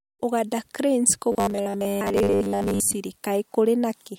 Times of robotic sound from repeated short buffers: 1.32-2.94

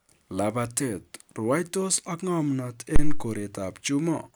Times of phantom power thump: 2.96-3.30

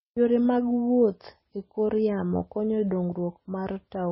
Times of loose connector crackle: none

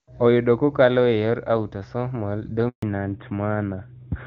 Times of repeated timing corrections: none

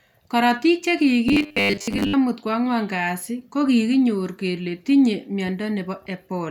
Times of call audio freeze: none

